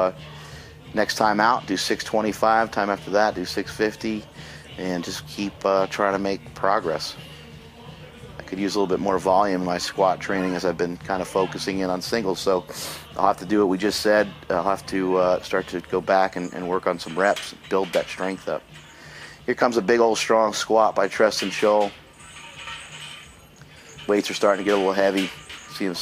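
Right around 20.04 s there's a single sharp click, likely dropped samples: a couple of samples go missing, so the waveform jumps abruptly.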